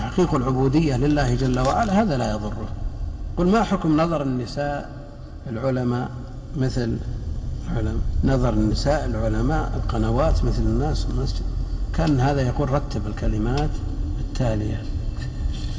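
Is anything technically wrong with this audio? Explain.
No, nothing is technically wrong with this audio.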